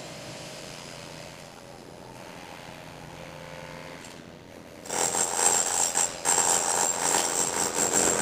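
A recording of sounds. From 0.60 s to the end, overlap-add ripple pulses the level by about 11 dB, around a hundred times a second. Mismatched frame overlap causes this metallic buzz.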